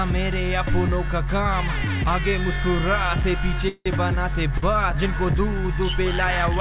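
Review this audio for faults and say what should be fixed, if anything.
The likely cause of the call audio freeze from 3.68 to 3.88 s is packets held up in transit, so the jitter buffer ran dry. The receiver carries the last sound forward as a fading buzz for about 175 ms, with roughly the final 40 ms gone silent, then resumes exactly where it stopped. Nothing is lost, but the audio runs about 175 ms later from that point. A deeper or more adaptive jitter buffer, or a more stable network route, would absorb a delay spike of this size.

A short stall from a late packet at 4.58 to 4.64 s happens when one packet misses its playout time and the jitter buffer empties briefly. The receiver stretches the preceding sound for about 47 ms, which comes across as a slightly held, faintly buzzy moment, then continues from the same point with nothing skipped and a further 47 ms of added delay. Allowing the jitter buffer a little more headroom would let a packet this late arrive before it is needed.

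Both events sit on a G.711 mu-law call path, which explains why nothing is heard above 4 kHz.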